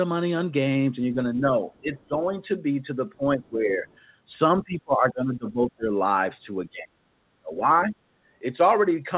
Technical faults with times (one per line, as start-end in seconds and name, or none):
1.14-2.39 speech suppressed in double talk
1.74-2.03 other side's voice leaking through
3.00-3.86 speech suppressed in double talk
3.88-3.97 other side's voice leaking through
4.55-5.91 speech suppressed in double talk
6.64-6.98 speech suppressed in double talk
7.35-7.95 speech suppressed in double talk
8.23-8.27 background gated by the echo canceller